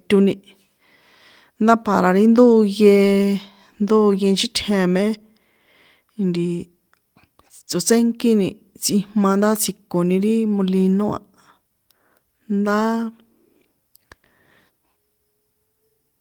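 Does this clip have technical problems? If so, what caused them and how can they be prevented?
No, this clip has no technical problems, so there is nothing to trace to a cause or prevent.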